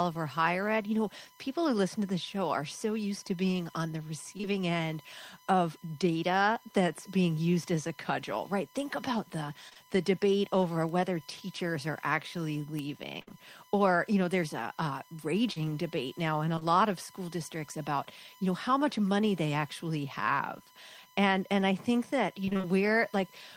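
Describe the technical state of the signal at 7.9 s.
At 7.9 s, as throughout the clip, USB whine sits under the speech: a steady 1 kHz tone, roughly 30 dB down, from 1 ms bus frames leaking into the audio through power or ground.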